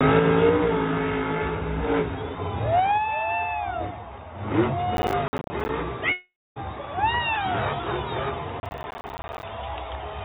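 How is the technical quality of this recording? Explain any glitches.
The recording has three glitches: two bursts of crackle and one break. It passes through a narrowband call path that leaves nothing above 4 kHz.

From 4.97 to 5.69 s and again from 8.6 to 9.43 s there is processor overload crackle. The processor repeatedly missed its deadlines for buffers of about 10 ms, leaving dozens of tiny hard-edged silent gaps. Unlike a dropout, the sound keeps going between these many short gaps.

From 6.12 to 6.59 s the audio breaks once, likely from a long network dropout. A fading continuation gives way to about 0.27 s of silence, and about 0.44 s of audio is lost. It is one continuous hole, not a gritty texture.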